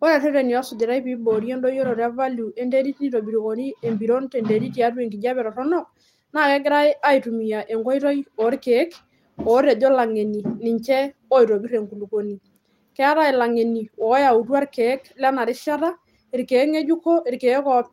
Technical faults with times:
none

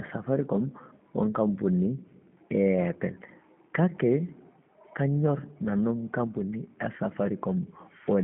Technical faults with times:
0.00-8.23 G.729 codec

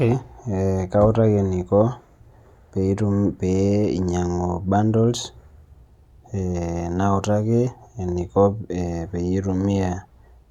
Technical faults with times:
none

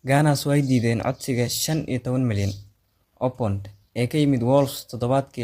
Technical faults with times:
0.00-5.43 low-delay AAC compression

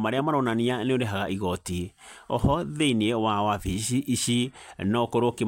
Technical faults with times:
none

